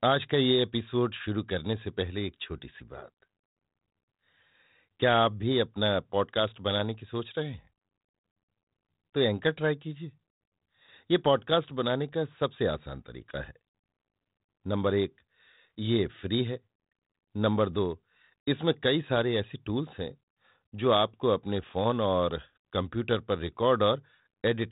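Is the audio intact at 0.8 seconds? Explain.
Yes, the audio is intact at 0.8 seconds, with no fault at that moment beyond the band limit near 3.8 kHz of the 32 kbit/s G.726 telephone coding running through the whole clip.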